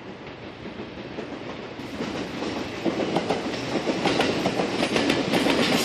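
From 1.79 s to the end, the audio shows pre-emphasis left on: the treble lift applied before recording or transmission was never undone by the matching de-emphasis on playback. The curve matches the FM 50 µs characteristic, leaving 10 kHz about 11 dB hotter than 1 kHz. The result is a thin, glassy top end with exaggerated sibilance, and the lower and mid range sounds weak by comparison. Applying 50 µs de-emphasis over that span would restore the balance.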